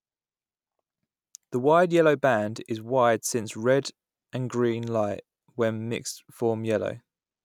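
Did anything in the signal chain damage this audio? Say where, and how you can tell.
No, nothing in this speech recording stood out as damage from any stage of the signal chain on listening.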